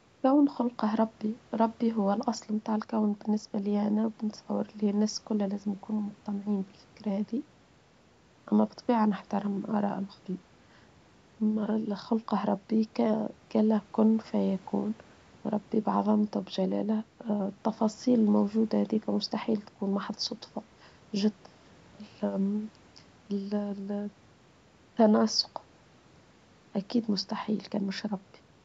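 No technical faults can be heard in this speech: it carries the ordinary signature of call microphone processing, with the lowest bass trimmed by the usual high-pass filter and nothing present above 8 kHz.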